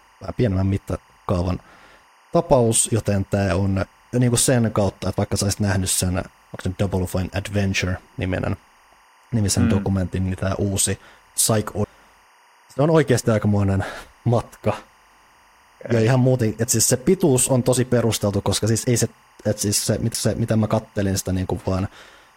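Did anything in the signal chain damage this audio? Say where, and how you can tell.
Yes. A chirping warble sits under the speech throughout, near 1 and 2 kHz, about 35 dB down. This is timecode bleed in the analogue wiring, with 23.976 frames-per-second code leaking across.

At 20.14 s a mute of a few milliseconds breaks the sound before it resumes elsewhere. This is a CD skip at playback, where the laser jumped tracks.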